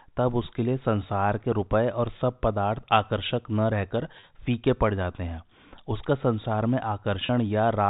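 In this speech clip, packet loss with pitch repetition occurs at 4.20 s and 7.26 s: each 30 ms gap, consistent with a single lost packet, was bridged by a repeated pitch period, heard as a brief held, buzzy note, over a G.711 telephone band that cuts everything above 4 kHz.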